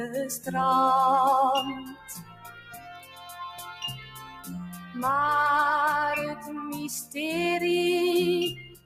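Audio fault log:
Throughout: noise suppressor applied to music or sounds. Level swings by roughly 10 dB as sustained parts and tails are treated as noise while attacks pass, giving pumping rather than simple compression.
1.79–4.5 s, 4.73–4.95 s, 8.54–8.85 s: sound cut by the noise suppressor. Steady or decaying sound drops by about 13, 6 and 17 dB, with tails cut short while sudden onsets stay intact.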